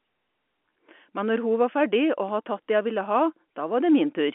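No technical faults can be heard in the speech. It carries the narrow sound of a G.711 telephone line, with the band running from about 250 Hz to 3.4 kHz and nothing above 3.8 kHz.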